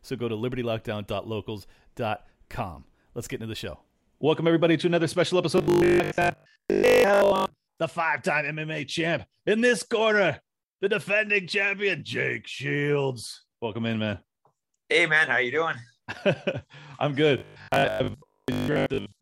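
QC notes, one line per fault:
5.58 to 7.78 s, robotic sound from repeated short buffers. After "everybody to another special", speech becomes a rigid metallic buzz at 50 Hz until "the five time". Most of the audio is likely replaced by repeats of the last 20 ms.
17.38 to 19.20 s, robotic sound from repeated short buffers. The same 50 Hz buzz returns until the end. Most of the audio is skipped, likely because 20 ms chunks repeat while new audio arrives too seldom.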